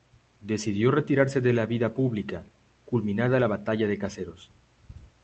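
No technical faults can be heard anywhere in this speech recording. A low background noise from the room sits about 44 dB below the speech, which is part of the recording itself.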